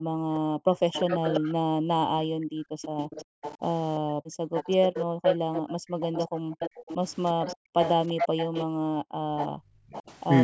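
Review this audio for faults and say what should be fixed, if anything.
Background gated by the echo canceller: while far-end audio played, the canceller clamped the microphone, so the room sound dips by up to about 40 dB in bursts totalling about three seconds between 0.00 and 6.51 s, and about a second and a half between 7.56 and 9.89 s. Retuning the suppressor to attenuate less deeply, or adding comfort noise during suppression, would prevent these dropouts.

Echo leak: a second, fainter copy of the speech trails the original by about 0.35 s, from 0.93 to 1.54 s and from 4.55 to 10.03 s at around 10 dB below the speech, and from 2.82 to 3.58 s at around 20 dB below. The likely cause is an echo canceller on a loudspeaker endpoint failing to fully remove its own playback before sending the signal back. A better-converged canceller, lower loudspeaker volume or a headset on that end would stop it.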